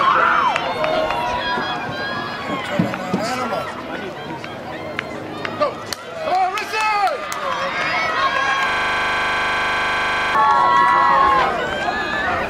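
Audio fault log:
8.70–10.35 s, system hang loop: a rasping 25 Hz buzz as one 40 ms slice repeats about forty times, the frozen system leaving hardware cycling its buffer.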